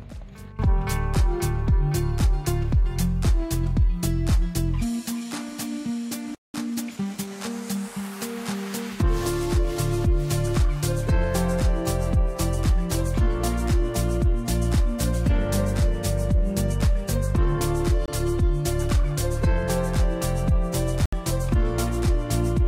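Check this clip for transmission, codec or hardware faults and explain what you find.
There are four faults here: a stall followed by a catch-up, and two short Bluetooth dropouts.

At 6.35 s there's what sounds like a playback stall. The audio just stops mid-flow for about 0.19 s, until 6.54 s, then picks up where it left off. That's the player likely running dry on data or having its thread blocked, so nothing reaches the output until it recovers. It's a clean, noticeable hole rather than a click.

Right after that, from 6.54 to 7.30 s, you get time-compressed catch-up. The player is trimming the backlog that built up during the stall by cutting out small slices and cross-fading the joins, so the audio runs at about 1.25 times normal speed while holding its pitch. It sounds rushed, then settles back to normal pace.

Then there are two Bluetooth dropouts. The first is at 18.06 s, a gap of about 23 ms, and the second runs from 21.06 to 21.13 s, about 70 ms. 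Both are likely packets not reaching the headphones in time and being discarded. The gap lengths fit one lost packet and then three. The sound comes back further along, as though it kept playing underneath.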